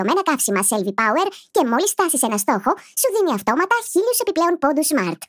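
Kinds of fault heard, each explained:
Wrong sample rate: the speech sounds hurried and high throughout, 1.45 times too fast and 6.45 semitones up, which fits 22 kHz audio played at 32 kHz unconverted.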